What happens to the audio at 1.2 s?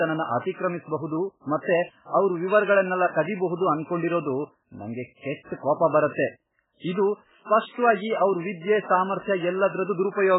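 At 1.2 s the speech is passing through heavy MP3 compression, likely at a bitrate as low as about 8 kbps. Short of bits, the encoder strips everything above 3.8 kHz and zeroes weak frequency lines frame by frame, so the sound is dull, watery and swirling across the whole clip.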